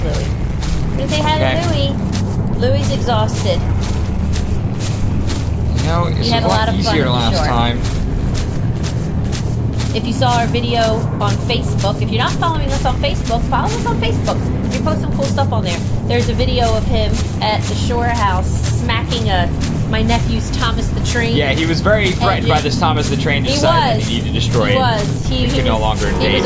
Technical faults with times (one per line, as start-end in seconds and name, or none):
none